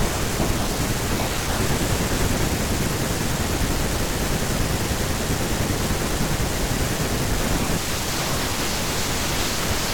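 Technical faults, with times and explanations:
Nothing technical stands out anywhere in this speech recording, so there's no fault to list.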